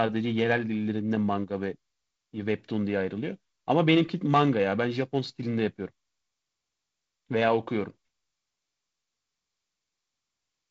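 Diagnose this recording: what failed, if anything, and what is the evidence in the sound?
Nothing has failed here; the speech simply comes through G.722 wideband telephone coding, with nothing above about 7.8 kHz and a slightly grainier lower band that fits the codec's 48 kbit/s mode.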